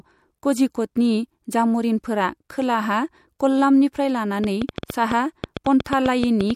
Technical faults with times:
3.39 pre-echo
4.44-6.51 train of clicks
5.55 pre-echo
5.84 pre-echo

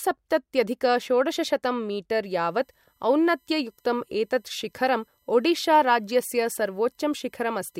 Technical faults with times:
2.23-7.80 USB whine

